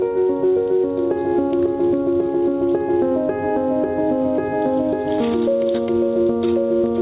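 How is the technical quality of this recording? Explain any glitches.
The recording has one fault that runs through the whole clip. It is heard over a narrowband call path that leaves nothing above 4 kHz.

Gain pumping, throughout: the level swings by around 10 dB. The likely cause is input gain set far too high, with a fast limiter clamping down on every peak. The result is squashed, with loud and soft parts pressed close together.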